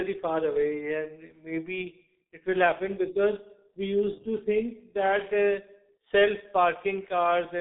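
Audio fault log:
Throughout: G.723.1 codec, a heavy 6.3 kbit/s voice-model coding that leaves muffled, hoarse speech with smeared consonants; a spectrogram shows nothing above about 3.8 kHz.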